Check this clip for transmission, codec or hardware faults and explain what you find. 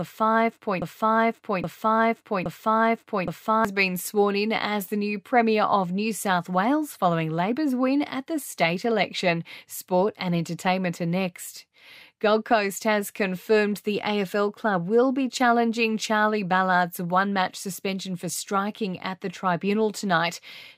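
One fault stands out, a broken-record loop. From 0.82 to 3.65 s, a likely stall in playback or streaming kept resending its last fragment, so a 0.82 s piece of speech repeats three times back to back and the speech that belonged there is lost.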